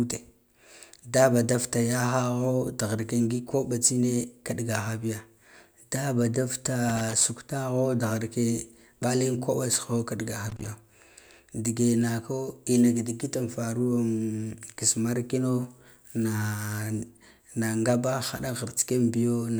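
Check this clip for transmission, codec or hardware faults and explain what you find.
There's a hardware fault here: loose connector crackle, twice, from 6.89 to 7.21 s and from 10.49 to 10.68 s, right after "tsoho kiɗgaha". A worn contact is making and breaking, chopping the speech into short, irregular bursts of scratchy crackle.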